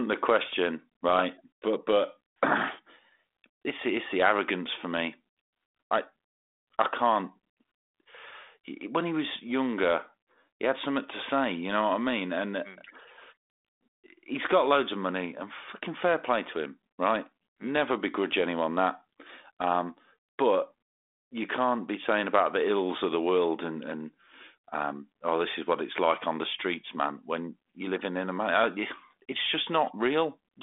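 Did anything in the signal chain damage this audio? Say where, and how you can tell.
No, nothing damaged this audio.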